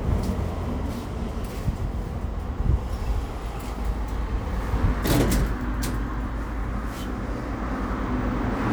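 No technical faults can be heard in this recording of sounds; the signal holds steady throughout, with nothing disrupting it.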